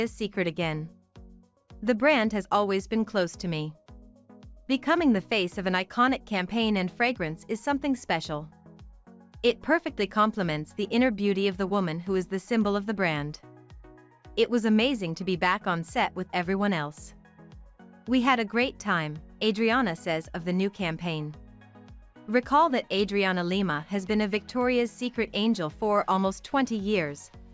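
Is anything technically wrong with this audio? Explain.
No, nothing technically wrong can be heard in this audio. The sound holds steady throughout, with no interruption or disturbance to point to.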